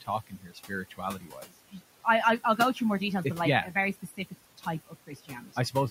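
Noise suppressor artifacts run through the whole clip. The suppressor pulls down the bands it judges to be steady noise by about 17 dB, frame by frame, so the room noise, which sits about 16 dB below the speech, sinks in the gaps and rises again under the talking. On a spectrogram the background appears as a patchy, speckled floor that switches on and off with the speech.

Speech cut by the noise suppressor first appears from 0.27 to 0.72 s, where nearly half a second of soft sound drops by up to about 18 dB. It happens again from 0.9 to 1.53 s, just before "I I will go", with a drop of about 16 dB. After "like yeah a very" it hits from 3.94 to 4.34 s, and the last instance runs from 4.87 to 5.75 s, both about 15 dB down. The suppressor mistook faint speech for noise, so those parts sound swallowed. The waveform shows the envelope collapsing there, and the spectrogram shows faded, missing detail.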